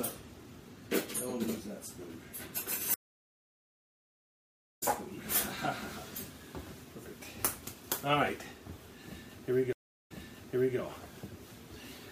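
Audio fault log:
2.94–4.83 s, stream reconnect: the link dropped, leaving about 1.85 s of silence. A fresh decoder then picks up the live stream roughly 1.5 s further on, so that stretch of audio is skipped.
9.73–10.78 s, stream reconnect: a 0.35 s gap follows another dropout. Playback resumes 0.71 s earlier, as the server resent buffered audio, so the preceding material is heard again.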